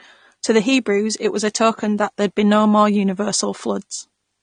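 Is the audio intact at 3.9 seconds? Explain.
No. At 3.9 seconds, as throughout the clip, the speech carries AAC compression damage. Nothing sounds above 9.7 kHz, and sibilants come out dull, smeared and fizzy. That is likely an AAC-LC encoder at a low bitrate around 32 kbps quantising coarsely and cutting the top band.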